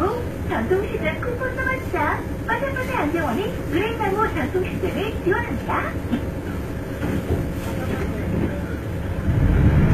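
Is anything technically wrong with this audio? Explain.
Yes, two faults run through the whole clip.

The signal has been reduced to very few bits, which fits 8-bit resolution, with dither added before rounding. This low bit depth with dither turns the rounding error into a steady, even hiss, roughly 30 dB below the signal, with no distortion.

The treble has been rebuilt from lower bands rather than preserved, likely by HE-AAC compression at a rate that points to about 20 kbps. Copied harmonics don't line up, so bright detail sounds gritty and metallic, and nothing remains above 14.8 kHz.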